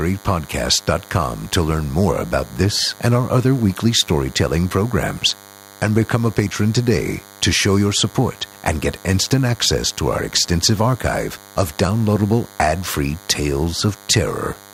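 A thin, steady buzz sits under the speech from start to finish, roughly 25 dB below it, pitched at 100 Hz and rich in harmonics. This is DECT cordless phone buzz: a nearby handset or base station transmits a radio burst every 10 ms, which the audio circuitry rectifies into sound.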